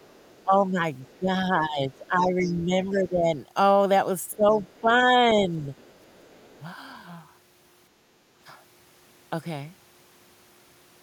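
From 0.0 to 1.18 s a faint second voice sits under the speech, roughly 35 dB down: the other side's voice leaking through, likely loudspeaker echo the canceller missed. It returns louder, near 25 dB down, at 1.93–3.0 s, then at 4.31–4.8 s and 5.77–6.62 s. On a spectrogram it shows as weak harmonic traces beneath the main ones. Across 0.45–3.28 s and 4.31–5.71 s the talker's level dips by up to about 15 dB in patches, about two seconds in total and then under a second: speech suppressed in double talk, likely the canceller turning both voices down together. The waveform envelope shows sudden notches.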